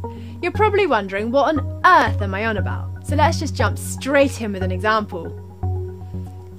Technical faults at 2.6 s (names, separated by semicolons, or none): clock drift buffer slips